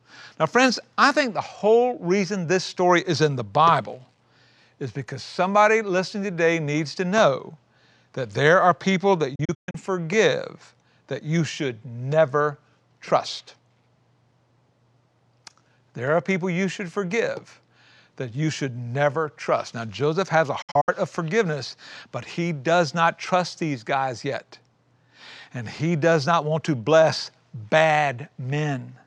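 Speech with two digital broadcast dropouts, at 9.35–9.75 s and 20.62–20.89 s, where the receiver muted on corrupted frames. Each is a cluster of short, clean silent holes (longest 128 ms, then 64 ms), entered through an 8 ms fade, not the hiss of weak analogue reception.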